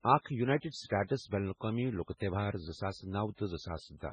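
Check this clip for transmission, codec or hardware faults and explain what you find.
One fault runs through the whole speech clip, likely MP3 compression at heavy damage. All content stops abruptly at 9.7 kHz, a flat ceiling on a spectrogram, and weak lines blink on and off frame to frame as speckled gaps. It sounds watery and swirly, with chirpy s sounds and smeared onsets, which fits a bitrate around 16 kbps.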